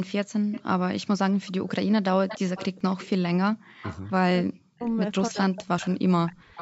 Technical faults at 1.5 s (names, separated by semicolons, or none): none